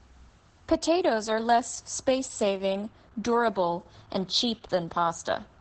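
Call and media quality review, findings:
Opus voice compression, whole clip: speech muffled, hoarse, a bit robotic, band stops at 8.5 kHz. Sounds like SILK in wideband, excitation coded coarsely, which fits roughly a 10 kbps stream. Damage is heavy. Worth checking the encoder bitrate setting.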